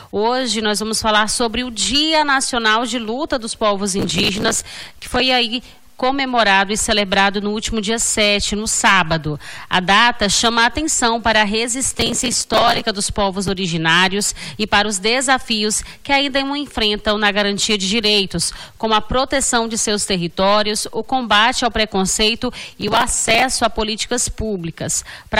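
Processor overload crackle tears through the sound from 3.99 to 5.20 s, 11.90 to 12.84 s and 22.72 to 23.42 s. Dozens of short buffers, around 5 ms each, miss their deadlines in a row and replay stale audio with hard edges. Unlike a single dropout, it is a gritty burst that clears once the load eases.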